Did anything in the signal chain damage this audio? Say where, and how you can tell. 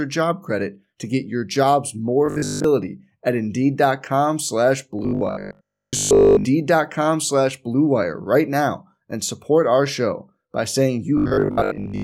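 Yes. Likely driver-level buffer starvation repeating 20 ms blocks causes robotic sound from repeated short buffers: a rigid 50 Hz buzz at 2.26–2.64 s, 4.99–6.45 s, and 11.18 s onward.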